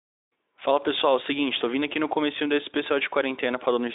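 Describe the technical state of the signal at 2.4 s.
At 2.4 s the signal is intact, with no fault in the speech at that point beyond the narrow telephone-style band, roughly 300 Hz to 3.7 kHz, of the Speex path it passes through.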